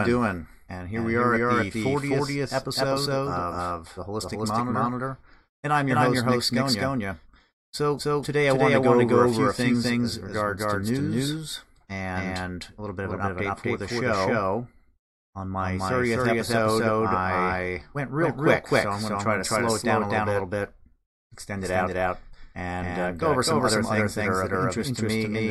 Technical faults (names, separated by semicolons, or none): doubled audio track